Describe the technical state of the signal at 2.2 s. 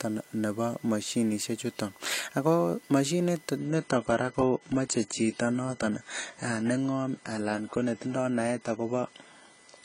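At 2.2 s the speech carries USB whine, present throughout the clip. USB frame current leaks into the audio, producing a steady 1 kHz tone, strongest at 2 kHz, about 30 dB below the speech.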